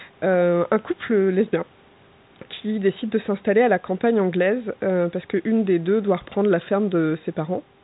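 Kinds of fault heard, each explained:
No technical fault can be heard: the speech comes through as ordinary fixed-line telephone audio, band-limited with nothing above about 3.9 kHz as expected from G.711 A-law coding, and any quantisation noise stays faint beneath the signal.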